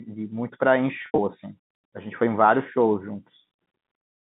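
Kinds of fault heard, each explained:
Packet loss with pitch repetition: from 1.02 to 1.18 s, about 120 ms drops out in bursts, the longest 80 ms. The receiver loops the last pitch period, giving a brief buzzy hold. Spectrograms show frozen, flat harmonics; the waveform shows identical repeating cycles fading down.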